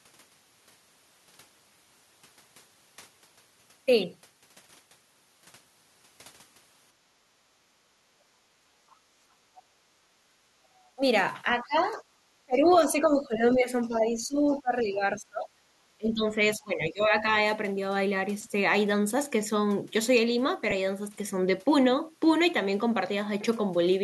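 From 8.23 to 10.46 s the room sound behind the speech dips and partly drops out, by about 14 dB at its deepest and for about a second in all. This is background gated by the echo canceller: while the loudspeaker played, the canceller clamped the microphone down and then released it.

At 9.55 to 9.63 s and again at 10.78 to 10.88 s, a brief, faint scrap of a second voice surfaces, well below the main speech and fainter the second time. This is likely the other side's voice leaking through, loudspeaker sound the echo canceller failed to remove from the microphone.

The talker's speech then sinks by roughly 20 dB, briefly at 10.95 to 11.03 s and then in patches between 11.58 and 17.3 s, about four seconds affected in total. This is likely speech suppressed in double talk: with both sides talking at once, the canceller could not tell the talker from the echo and turned everything down.

At 20.71 s there is a tiny smeared, noisy blip lasting about 10 ms, which fits a single lost LE Audio frame. 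The LC3 decoder filled the gap by reusing the previous spectrum with randomised signs, so the sound briefly turns to noise instead of silence.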